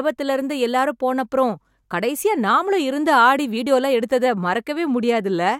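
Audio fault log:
No faults are present in this speech recording. Nothing in the audio calls for an entry in the log.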